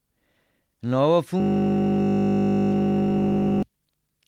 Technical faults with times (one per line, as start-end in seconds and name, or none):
1.40-3.63 system hang loop